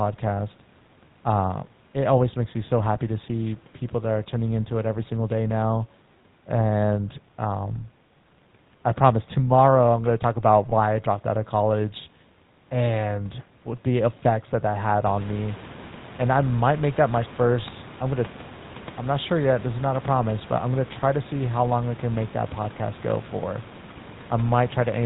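Speech runs through the GSM full-rate codec for the whole clip, and the damage is plainly audible. The voice is buzzy and gravelly throughout. The codec rebuilds speech from a vocal-tract model driven by regular pulses. It keeps only every third excitation sample. Nothing above 4 kHz survives, so the sound is dull as well as rough. This fits a 13 kbps full-rate stream. There are also two brief lost GSM frames. The first runs from 10.70 to 10.73 s, between "going to talk about" and "I dropped out of". The second runs from 17.62 to 17.65 s, between "might make that my" and "I'm going to". Each is a short metallic ring. The decoder repeats the last good frame's settings. Each gap fits a single 20 ms frame, too short to fade to silence. The room noise is part of the recording. It rises by about 16 dB around 15 s and stays about 20 dB below the speech.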